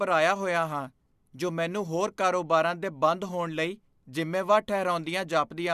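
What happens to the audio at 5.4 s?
Nothing goes wrong at 5.4 s; the speech there plays through intact, with no dropout, click, distortion or other fault at that moment.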